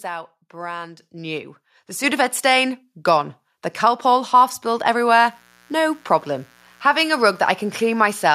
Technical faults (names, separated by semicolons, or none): microphone volume stepped up; mains buzz